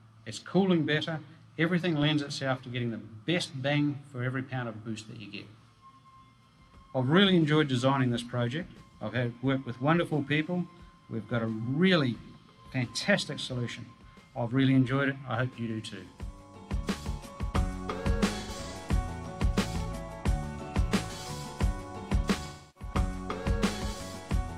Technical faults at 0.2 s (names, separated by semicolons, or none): none